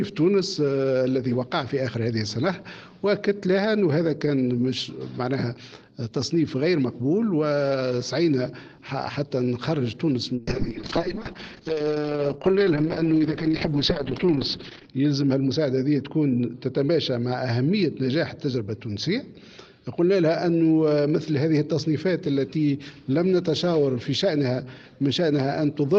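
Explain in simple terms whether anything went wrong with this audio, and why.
A call bitrate drop occurs from 10.39 s to 22.25 s. The connection's estimate of available bandwidth fell, so the encoder was forced to describe the sound with far fewer bits. The audio turns coarse and muffled because everything above about 6 kHz is cut off, removing the crisp top end. The worst stretch lasts about 4.5 s, and clarity returns once the call regains enough bandwidth.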